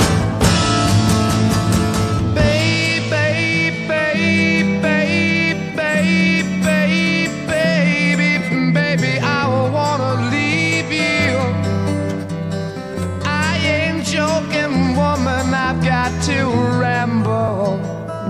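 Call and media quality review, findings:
Single tick at 17.48 s, a sharp click with no audible gap. Block of digital silence, about 2.7 ms of zeroed samples; abrupt cut to zero and back creates the click. Probable component: audio output path, buffer not filled in time.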